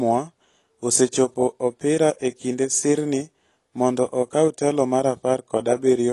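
AAC compression runs throughout the speech, and the damage is plainly audible, likely from AAC-LC at a low rate, around 32 kbps. Starved of bits, the encoder drops the top band and coarsely quantises what remains, leaving speech dull and smeared with a fizzy edge on sibilants.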